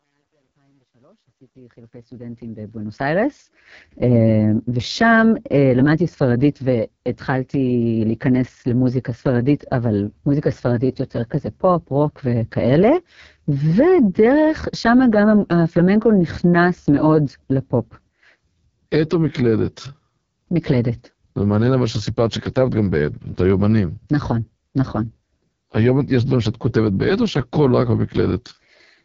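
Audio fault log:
throughout – AMR wideband (HD Voice) codec: The speech sounds rough and raspy throughout, with nothing at all above 7.3 kHz. This codec models the voice with a pulse-driven vocal tract filter up to 6.4 kHz and fills the band above that with shaped noise. The heavy roughness points to its lowest mode, around 6.6 kbit/s, where too few bits remain to rebuild the excitation faithfully. The result is a grainy, buzzy texture rather than clean detail.
0.00–3.29 s – truncation distortion on a fade: The opening fade sounds gritty and grainy instead of smooth, and the grit is worst from 0.00 to 2.09 s, where the level is lowest. A digital gain stage kept too few bits, about 10, and added no dither. Near the smallest step, the waveform collapses into a handful of coarse square steps. That quantisation error follows the signal itself, so it is heard as distortion rather than as a steady hiss.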